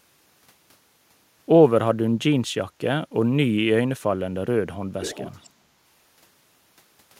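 From 5.01 to 5.5 s an echo leak returns a faint copy of the speech 400 ms late, well below the direct sound, likely from a far-end loudspeaker whose echo canceller let it through. A spectrogram shows the harmonic bands repeated, fainter, 400 ms later.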